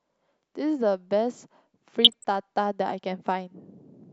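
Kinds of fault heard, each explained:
DAB burbling: from 2.04 to 2.24 s the speech is hit by burbling as bit errors from weak reception, a small fraction of a percent, slip past error correction and corrupt MP2 samples, putting short blips of noise in single sub-bands.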